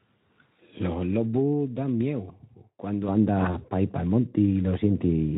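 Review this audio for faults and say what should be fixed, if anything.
VoIP packet loss concealed by the speech codec at 0.53–0.58 s and 3.51–3.60 s: the decoder extrapolated from its last pitch and filter, leaving a brief smear that fits one lost 20 ms frame. Prevent it with forward error correction or a larger jitter buffer.

De-emphasis applied wrongly from 3.08 s to the end: a treble cut was applied to audio that had no pre-emphasis, or was applied twice, sloping to about 11 dB down at 10 kHz relative to 1 kHz, so the speech turns dull. Prevent it by matching de-emphasis to the actual pre-emphasis state. The light coloration from the Speex codec at 15 kbps was not counted as a fault.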